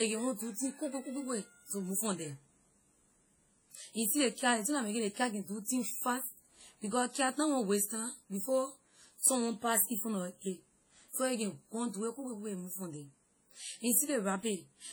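WMA compression, likely, runs throughout: long transform blocks smear quantisation noise around the speech, giving a ringing, washy hiss that pumps with the signal, fitting roughly 32 kbps.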